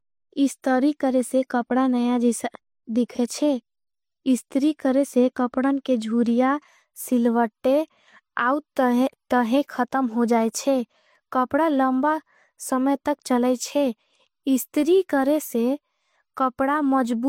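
The speech in this clip has likely been through transcoding between lossy codecs, first something like HE-AAC at a low rate around 48 kbit/s and then MP3 near 57 kbit/s. Each stage layers its artefacts on the last, so the whole recording carries both the smeared, slightly synthetic top end of the first codec and the swirly quantisation of the MP3. Nothing survives above 16.5 kHz, the lowest cut-off in that chain.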